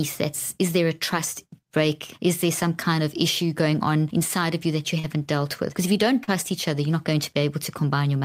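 At 4.99 to 5.05 s, between "of you that you" and "dealt with", and at 6.23 to 6.29 s, after "if you don't" and before "each other you're not", short concealed packet loss replaces about 40 ms each time with extrapolated sound. Each is heard as a brief smear, and on a spectrogram it appears as a blurred, smoothed patch in the harmonics.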